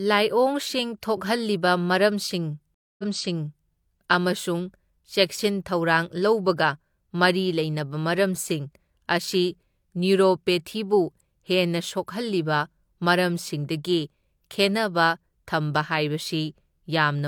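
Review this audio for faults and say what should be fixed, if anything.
A stream reconnect breaks the speech at 2.74 s and runs to 3.68 s. The connection dropped and the player went silent for 240 ms. It then reconnected and started a new decoder mid-stream. Playback resumes 697 ms earlier than where it stopped, so that stretch is heard twice before "ꯑꯃꯁꯨꯡ ꯆꯦꯛꯁꯤꯟ ꯊꯧꯔꯥꯡ". The server re-sent a burst of earlier audio on reconnect. To prevent it, stabilise the connection and have the player skip already-played audio after reconnecting.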